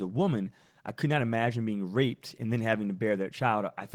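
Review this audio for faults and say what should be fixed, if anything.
Opus voice compression runs through the whole speech clip, with plainly audible damage: the voice sounds hoarse and slightly robotic, consistent with roughly 16 kbps in hybrid mode. The linear-prediction layer codes everything below 8 kHz with a coarse excitation, while a thin transform layer covers the band above. On a spectrogram, harmonics look smeared below 8 kHz, the upper band appears patchy in blocks consistent with 20 ms frames, and nothing shows above about 20.2 kHz. To prevent it, encode at a higher bitrate or keep an uncompressed master.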